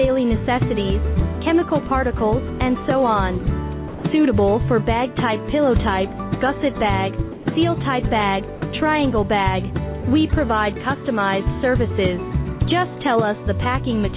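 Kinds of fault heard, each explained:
Sound dropped by the voice detector: gaps of 20 to 160 ms turn into steady comfort noise, likely from the sender mistaking quiet sound for background; packet loss would bring clicks or repeats instead.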